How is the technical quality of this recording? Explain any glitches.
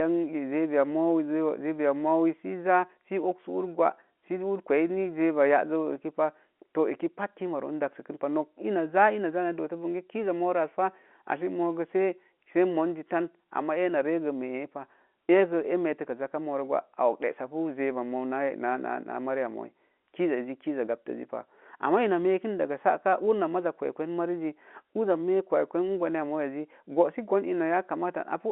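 No glitches can be heard anywhere in the recording. The speech comes over a G.711 telephone line, so it sits in a narrow band from about 250 Hz to 3.4 kHz, with at most a faint grain from the coding.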